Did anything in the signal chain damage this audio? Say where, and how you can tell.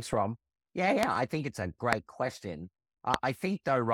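Yes, three loud pops cut through the speech, each a single sharp hit some 25 dB above the speech, while the speech carries on beneath it. They fall at 1.03 to 1.05 s, just before "I think it's a", at 1.93 to 1.95 s, right after "I think it's a", and at 3.14 to 3.16 s. The likely cause is a sudden voltage step or pulse added to the signal, from a plug, a switch, static discharge or a driver glitch, and then shaped by the circuits downstream.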